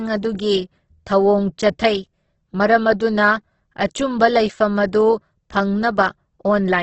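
Throughout the speech, nothing is heard above 8.2 kHz, and the sound is rough and grainy, likely Opus compression in its music mode at a bitrate near 12 kbps.

Pre-echo appears from 3.87 to 3.91 s. Quantisation noise sized for a sharp attack spreads back across the codec block, so a short 35 ms hiss precedes the onset, which sounds smeared.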